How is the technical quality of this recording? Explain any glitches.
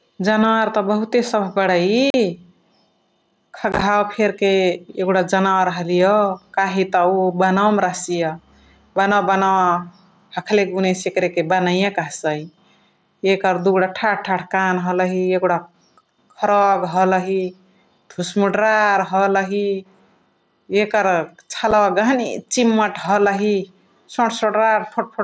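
The recording has two problems: the level breathes throughout, and there are three short dropouts from the wireless link. The speech tops out around 8 kHz, as you'd expect from a wideband Bluetooth headset path.

Gain pumping runs through the whole clip. The level swings by roughly 5 dB, pulled down whenever a loud syllable arrives, so quiet and loud passages sit unnaturally close together and the sound feels squashed. The likely cause is input gain set far too high for the mic, with a fast limiter or compressor clamping down on every peak and letting go in the gaps.

The unconcealed Bluetooth headset packet loss shows up three times. From 2.10 to 2.14 s there's a clean hole of about 38 ms with hard edges, which fits several consecutive headset frames going missing. Between 3.72 and 3.82 s the losses are scattered across about 90 ms, with no single gap longer than 15 ms, so that stretch comes across as a rough, chopped crackle rather than one dropout. 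At 21.71 s there's a single tiny gap of about 7.5 ms. Nothing filled these holes in, so the dropouts are left as silence or an idle pattern with abrupt edges.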